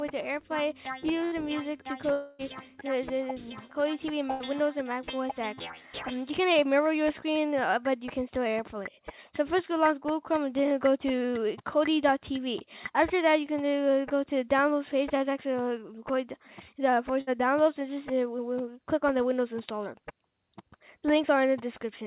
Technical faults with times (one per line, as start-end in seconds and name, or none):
1.25-1.36 burst of packet loss
2.12-2.42 long network dropout
4.31-4.43 burst of packet loss
17.21-17.30 burst of packet loss